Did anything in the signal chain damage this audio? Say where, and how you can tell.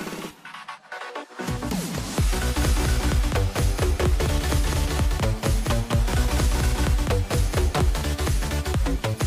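Yes. At 1.98 s there is a short blip from damaged data in the compressed stream. The decoder misread corrupt frames and lost sync briefly.

From 2.57 to 7.95 s a doubled audio track appears. A full-band copy trails about a fifth of a second behind, roughly 5 dB quieter, starting and stopping abruptly. It is likely from a second capture path or editing.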